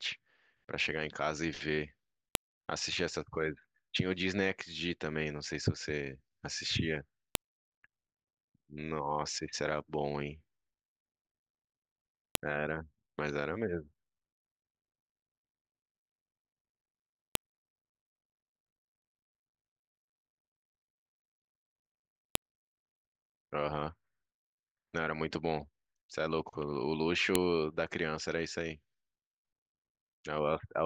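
File header played as audio at 2.35, 7.35, 12.35, 17.35, 22.35 and 27.35 s: stray header bytes at each 5-second join in the speech snap as sharp clicks.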